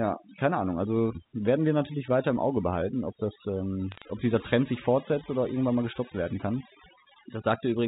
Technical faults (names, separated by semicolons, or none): overdone noise removal; bit errors on a digital phone line